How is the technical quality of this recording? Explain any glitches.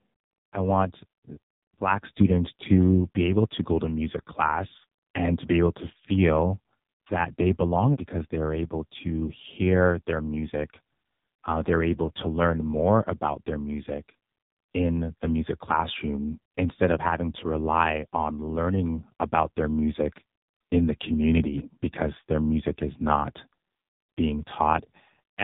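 The quality is poor throughout. From start to finish the speech sounds buzzy, thin and synthetic, with nothing above about 3.8 kHz. That is the AMR narrowband mobile codec. It rebuilds the voice from a vocal-tract model and a few pulses, and the heavy damage points to a low mode around 5.9 kbps.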